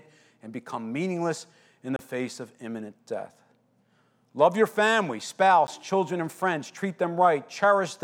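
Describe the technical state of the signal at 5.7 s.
Right at 5.67 s, between "your family" and "children and friends", there's a block of digital silence: about 10 ms where the signal drops out to silence and comes back with no fade, so the hard edges give a quick tick in the speech.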